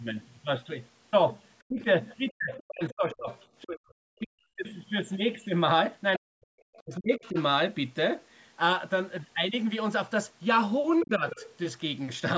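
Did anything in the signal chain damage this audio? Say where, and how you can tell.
Yes. The speech dips sharply or breaks up in pieces at 1.68–1.85 s, 2.35–3.29 s, 3.63–4.61 s, 6.18–7.37 s and 11.04–11.24 s, falling by roughly 20 to 40 dB. This is likely speech suppressed in double talk: the call's echo canceller couldn't separate the talker from the far-end echo while both spoke.

A second, fainter voice runs under the talker at 2.28–3.64 s, 6.73–7.42 s and 11.01–11.48 s, roughly 15 to 25 dB below the speech. This is likely the other side's voice leaking through: the call processing left residual loudspeaker echo in the microphone signal, coinciding with those suppression dips.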